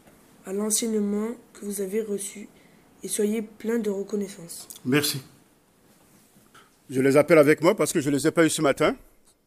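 No technical faults can be heard anywhere in this recording.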